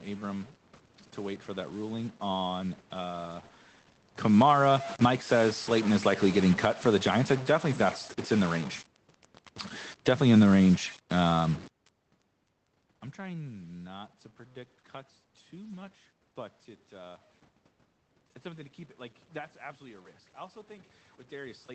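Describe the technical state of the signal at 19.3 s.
At 19.3 s the speech carries the grainy noise or buzzy distortion of a stuck bit that persists for the whole clip. The likely cause is one data bit held at a fixed value by a faulty line or converter. About half the samples are then off by that bit's weight in a pattern that follows the waveform, and sign changes at low level fill gaps with noise. Underneath, the call codec's band limit near 8 kHz is present.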